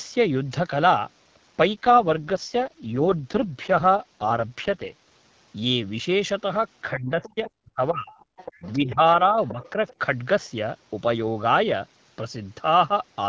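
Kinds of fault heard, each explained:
AMR rate drop: From 1.74 to 5.08 s the codec falls from 12.65 to 6.6 kbit/s, and the speech turns rough and buzzy. The spectrogram keeps the same bandwidth with no gap, but harmonics smear into grainier, less defined energy until the rate recovers.
Speech suppressed in double talk: The talker's level dips sharply at 6.92 to 8.12 s (roughly 40 dB at the deepest), 8.54 to 9.01 s (about 25 dB) and 9.31 to 9.61 s (about 10 dB). This is likely an echo canceller turning down both its own talker and the loudspeaker echo at once. The waveform shows sudden holes, and the spectrogram shows thinning.
Other side's voice leaking through: A faint second voice comes through at 7.23, 7.46, 8.13 to 8.76, 9.46 to 9.7 and 9.87 to 9.94 s. It sits about 20 dB below the speech, and about 30 dB below in the last scrap, as likely uncancelled loudspeaker echo. It appears as weak patches on the spectrogram.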